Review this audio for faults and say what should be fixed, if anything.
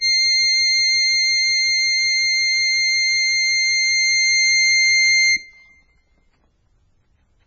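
Throughout the music, everything above 6.8 kHz is missing and the remaining sound is watery and swirly, which points to heavy MP3 compression at a very low rate, likely around 16 kbps. On a spectrogram this shows as a hard ceiling at 6.8 kHz with flickering, patchy blocks below it. Encode at a much higher bitrate, or keep an uncompressed master.

From 6.42 s to the end at 7.47 s, the section plays at the wrong speed: it runs 1.59 times faster, so everything turns hurried and about seven semitones higher. On a spectrogram the harmonics jump upward and spread apart at 6.42 s, and the waveform's events bunch closer together. Check that playback and editing use the same clock and sample rate as the recording.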